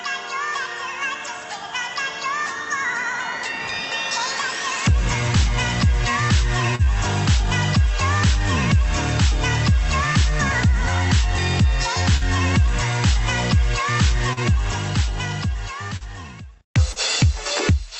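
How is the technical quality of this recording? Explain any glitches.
The recording has five short dropouts, all concealed. Short concealed packet loss occurs at 6.75–6.86, 12.17–12.24, 14.33–14.40, 15.97–16.03 and 16.92–16.99 s. Each time, about 40 ms of audio arrived too late. The receiver extended the preceding sound to bridge the gap, then blended back. Each event is a brief smear or wobble. The first one also adds a little extra length. The call codec's top end stops around 8 kHz, which fits Opus at about 32 kbps.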